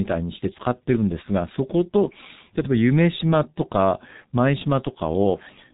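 From start to end the speech carries heavy G.723.1 codec damage. Nothing above 3.8 kHz survives, and the slowly updated voice model leaves a muffled, hoarse tone with smeared consonants, which fits a rate near 6.3 kbit/s. Simple band-limiting would stay clean rather than rough.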